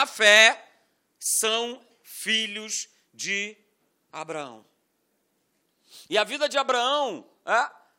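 Listening to the speech in this clip, nothing stood out as a technical problem at any point.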